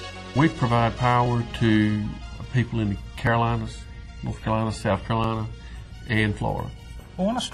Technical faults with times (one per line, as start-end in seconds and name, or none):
1.26-1.29 overlap between stream segments
3.27 overlap between stream segments
5.24 overlap between stream segments